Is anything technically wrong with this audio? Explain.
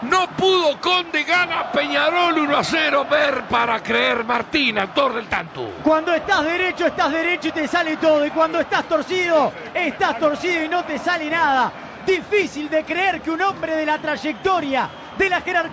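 No, nothing technically wrong stood out on listening to this audio.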